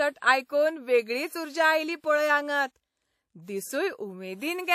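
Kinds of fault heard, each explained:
WMA compression: plainly audible ringing, washy smearing and hiss breathing with the speech, nothing above 17.4 kHz; likely a transform codec at a low bitrate, near 48 kbps.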